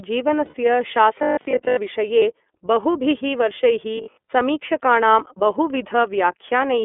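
The whole clip of speech sounds narrow and slightly rough and synthetic, with nothing below about 250 Hz or above 3.5 kHz. This is the iLBC codec, plainly audible here. Its character points to the 13.33 kbps mode, which codes each 30 ms frame independently.

From 0.45 to 0.55 s the speech turns into a held, faintly buzzy vowel for about 90 ms, then snaps straight back. These are lost iLBC frames, probably three. The decoder filled the gap by repeating the last pitch cycle mixed with noise.

Between 1.19 and 1.77 s the sound becomes a rigid, metallic buzz at 50 Hz that only loosely tracks the speech. This is robotic sound from repeated short buffers, likely caused by audio arriving too seldom. A stretch of about 20 ms was replayed over and over, and most of the real audio in that span was skipped.

At 2.19 to 2.23 s a shorter lost-frame gap of about 30 ms gives a brief held buzz, fitting a single missing frame.

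From 3.97 to 4.31 s the same 50 Hz robotic buzz returns.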